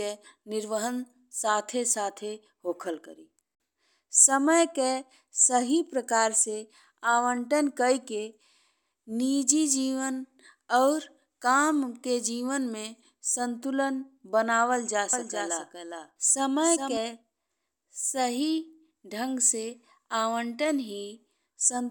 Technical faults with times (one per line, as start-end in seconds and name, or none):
15.13-16.97 doubled audio track